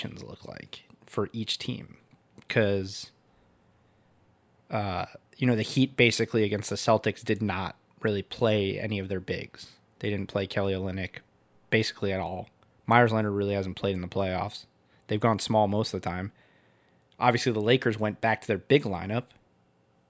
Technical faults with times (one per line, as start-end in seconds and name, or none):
none